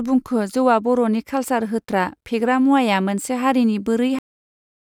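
The final buffers of this speech recording were never written out, a cut-off end. At 4.19 s the voice is severed mid-sound and falls straight to digital silence with no natural decay, leaving the last stretch of the file completely empty.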